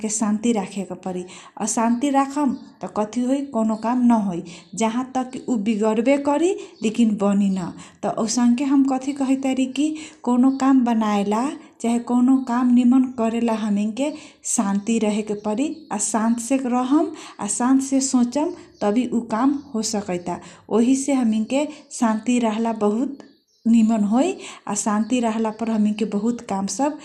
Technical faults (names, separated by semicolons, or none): MP2 compression